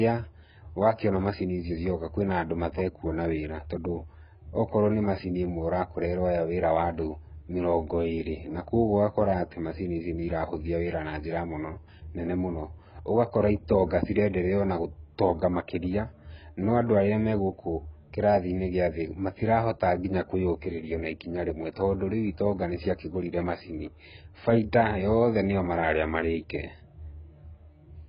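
Throughout the speech, nothing sounds above 5.3 kHz, and sibilants smear and warble. This is likely heavy AAC compression, fitting a bitrate near 12 kbps.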